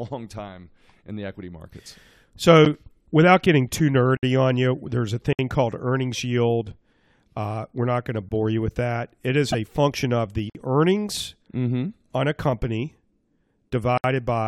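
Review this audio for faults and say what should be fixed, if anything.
Blocks of digital silence cut the speech six times: at 2.65 s (9 ms), 4.17–4.23 s (60 ms), 5.33–5.39 s (60 ms), 8.29–8.31 s (20 ms), 10.50–10.55 s (51 ms) and 13.98–14.04 s (65 ms). The signal drops straight to silence and returns unfaded. The shortest is a tick, the longer ones are audible holes. The output buffer was likely not filled in time. Give the audio thread more headroom or a larger buffer.

A corrupt frame decoded at 9.52–9.55 s. About one damaged frame was played anyway. Misread gains and codes placed energy at wrong frequencies for roughly 26 ms. It sounds like a brief chirp or blip. Add error detection so damaged frames are concealed, not decoded.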